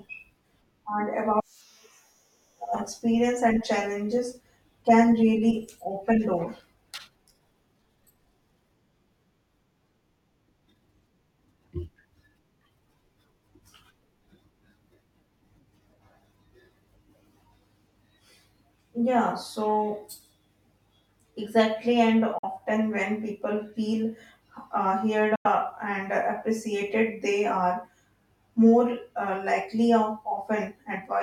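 At 22.38 s and again at 25.35 s the speech cuts out abruptly for about 46 ms and 93 ms, likely a Bluetooth dropout where late packets were discarded. Each gap shows as a flat, empty band on the waveform and spectrogram, with speech resuming as if time had continued.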